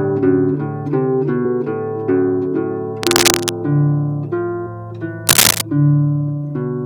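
A worn cable, plug or control being moved likely makes its contact resistance jump around erratically, and that shows up as cable scratch noise: dense, irregular crackling laid over the audio. The first burst runs from 3.03 to 3.52 s at roughly the same level as the sound itself. The second, from 5.27 to 5.61 s, is somewhat louder than the sound, so that brief scratching rustle sits clearly on top.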